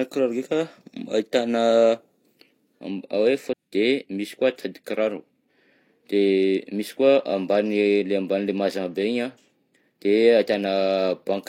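A stream segment was likely skipped: one segment of the segmented stream failed to load, and the player moved straight on to the next one instead of waiting or retrying. Between 3.49 and 3.53 s, the speech jumps abruptly forward at the join, with a short blip of about 50 ms. A stretch of the programme is simply gone, so the sentence resumes later than where it broke off.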